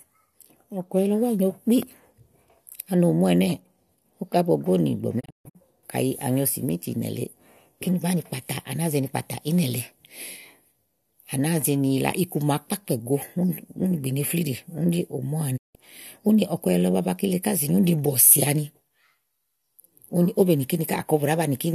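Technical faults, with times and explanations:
1.83–1.85 s, loud pop: a single sharp pop lasting about 20 ms, peaking a few dB above the speech, which carries on underneath. It is likely a voltage pulse from a switch, plug contact or static discharge entering the signal chain. On the waveform it is a tall, narrow spike standing out from the speech envelope. On a spectrogram it is a thin vertical line spanning low to high frequencies.
5.19–5.57 s and 15.56–15.77 s, digital broadcast dropout: the receiver stopped getting usable frames and muted until valid data returned, so the speech vanishes and the missing audio is lost. The first event is broken into several holes totalling 240 ms over about 340 ms, the longest 144 ms. The second is one 168 ms gap. Each mute fades over about 20 ms, and the lost frames are about 24 ms each. On the waveform these are flat silent stretches with short ramps at the edges, and on a spectrogram they are blank vertical bands.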